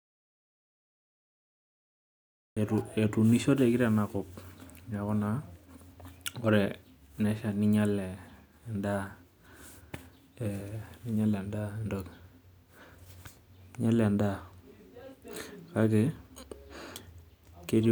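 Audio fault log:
0.0–2.57 s, audio dropout to silence: the input was likely lost through a disconnected device, failed link or mute while recording carried on writing zeros, so the clip opens in total silence with no room tone until the speech cuts in abruptly at "etuunishoteki teinakop".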